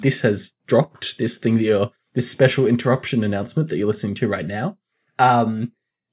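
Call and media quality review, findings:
Nothing to flag on this speech clip; no faults heard anywhere in it.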